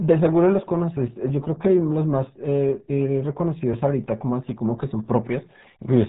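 Speech heard through the RealAudio 14.4 codec from start to finish sounds muffled and gargly, with heavy damage that fits an 8 kbit/s dial-up stream. A spectrogram shows a hard ceiling at 3.8 kHz for the whole clip, with smeared, blotchy energy beneath it.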